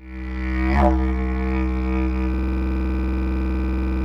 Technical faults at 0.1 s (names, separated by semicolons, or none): none